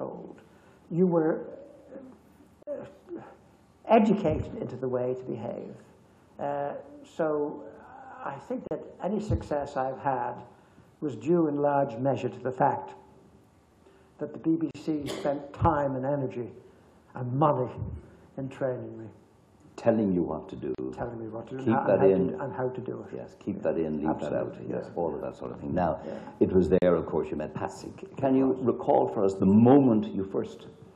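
At 2.63 s a gap at a join of encoded pieces cuts the sound for about 44 ms, and the same dropout recurs every 6 s at 8.67, 14.71, 20.75 and 26.78 s, each about 37 ms long. The audio was encoded in separate segments and concatenated without trimming, so each segment's encoder start-up delay and padded final frame remain as silence. Each gap has smeared edges, and the sound resumes where it stopped.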